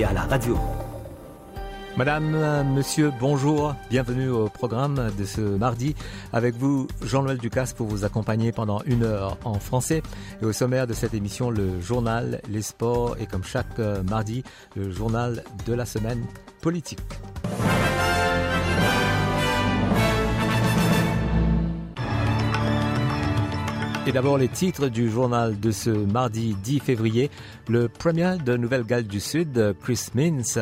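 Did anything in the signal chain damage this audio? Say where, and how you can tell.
Yes. Compressed frames were skipped in the codec at 5.56 s: the audio jumps ahead about a tenth of a second, roughly four 24 ms frames. Whole frames were missing or refused by the decoder, so playback jumps ahead by their length.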